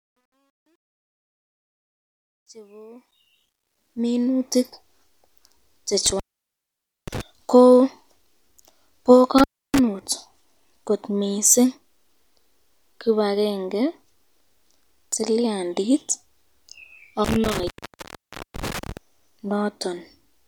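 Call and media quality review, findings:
Truncation distortion on a fade. 0.00–4.65 s, worst 0.00–2.98 s. Low-level start of the fade-in sounds gritty and stepped. Probable component: digital gain or fade stage without dither, which fits an 11-bit effective word length.

Intermittent contact. 6.06–7.21 s. Crackle, then dropout of about 0.88 s with faint residual hiss. Probable component: loose cable or connector momentarily opening the line.

Intermittent contact. 9.38–9.79 s. Shorter dropout of about 0.3 s, crackly edges. Same contact fault.

Intermittent contact. 17.25–18.97 s. Crackle and dropout of about 0.88 s, hiss during gap. Same contact fault recurring.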